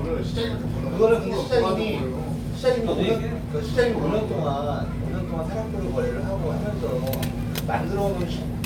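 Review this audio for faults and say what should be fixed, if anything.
Nothing to fix: no audible faults anywhere in the sound.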